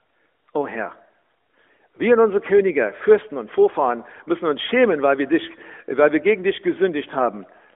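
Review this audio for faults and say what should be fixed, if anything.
Nothing in the recording needs fixing. The speech carries the narrow band of an AMR narrowband mobile codec, roughly 300 Hz to 3.4 kHz, with the light coding texture that fits its top 12.2 kbps mode.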